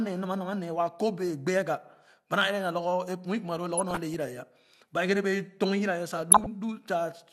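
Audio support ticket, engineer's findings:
DAB burbling at 3.77–4.14 s and 6.32–6.46 s. Burbling noise blips over the speech. The second burst is denser. Weak reception. Bit errors slip past error correction into the MP2 data. Corrupt samples put short noise blips in single sub-bands; corrupt scale factors make sub-bands jump in level for up to a frame.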